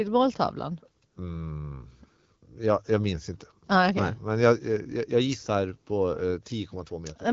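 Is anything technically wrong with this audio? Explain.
No, nothing here is technically wrong; this speech comes through the AMR wideband (HD Voice) codec at 12.65 kbit/s, which is just how that kind of call audio is meant to be carried.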